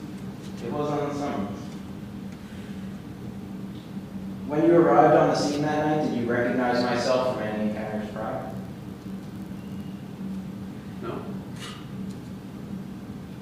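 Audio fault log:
8.40–9.88 s block size mismatch (padded): a brief zero-filled gap in every block, fitting 1024-sample reads, buzzes at 46.9 Hz; the waveform shows regular dropouts and the spectrogram evenly spaced vertical stripes.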